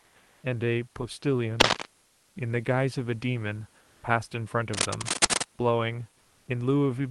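Comfort noise in place of the background fills the pause from 0.00 to 0.43 s. The real room background, about 37 dB below the loudest speech, gives way to a steady, featureless hiss about 2 dB quieter. This is likely discontinuous transmission in the call codec, with the receiver synthesising noise while sending stops.

Cable scratch noise follows from 1.60 to 1.86 s as a dense, uneven rustling a little louder than the speech. The likely cause is a worn cable or connector being moved, its contact resistance jumping about.

The same comfort-noise substitution returns at 2.05 to 2.35 s, about 1 dB quieter, and at 3.79 to 4.03 s with no level change.

A second, longer scratch burst runs from 4.74 to 5.44 s at roughly the level of the speech.

A final comfort-noise stretch covers 6.21 to 6.47 s at an unchanged level, again blank and detail-free compared with the real background.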